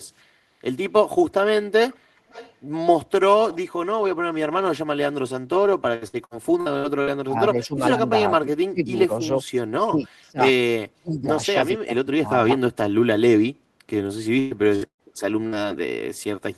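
Speech over a call link carries four kinds of fault. First comes an echo leak. A faint delayed copy of the speech returns about 444 ms late, at 1.9, 2.16 to 2.55 and 3.51 s. It sits roughly 20 to 30 dB below the speech. The likely cause is a loudspeaker echo canceller letting residue through. From 5.95 to 7.1 s there is repeated packet loss with a robotic sound. Six gaps hide about 360 ms of audio, the longest 61 ms. Each gap is patched by stretching the last sound, so the speech turns choppy with pieces missing. Next, the speech is suppressed in double talk at 7.26 to 9.19, 9.85 to 10.44, 10.94 to 11.39 and 11.74 to 12.56 s. The level dips by roughly 20 to 35 dB. Likely the echo canceller mistook both talkers for echo and turned everything down. Last, bursts of packet loss hit at 14.39, 14.75, 14.87 and 15.47 s. They last about 60 to 150 ms each. The lost stretch becomes a held buzz or fading hiss, and the one at 14.87 s fades to silence before the speech resumes further on.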